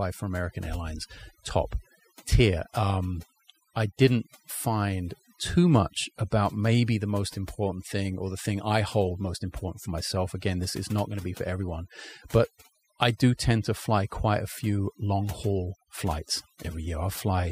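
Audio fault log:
throughout, overdone noise removal: a noise reduction stage was pushed far too hard on this speech, so any frequency band sitting close to its noise estimate gets pulled down or switched off entirely. The background noise between phrases collapses into near silence dotted with twinkling, chirpy specks where isolated bands briefly survive, and the softer parts of the voice are stripped away along with the noise.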